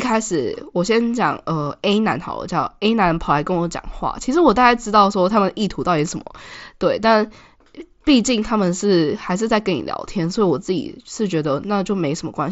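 No technical faults are audible in this speech.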